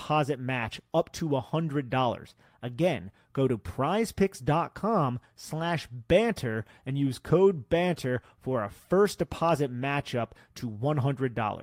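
Nothing in this recording jumps out as a technical fault; there are no dropouts, glitches or other problems to point to anywhere along the way.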